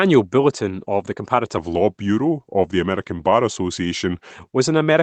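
From 1.57 s to 4.33 s, a section plays at the wrong speed. It runs at about 0.89 times its recorded rate. Pitch and tempo drop together, roughly two semitones lower. The speech turns deeper and more drawn out, then snaps back to normal. The likely cause is playback or editing against the wrong clock for that stretch. Throughout, the call path's Opus coding leaves the sound band-limited near 8 kHz.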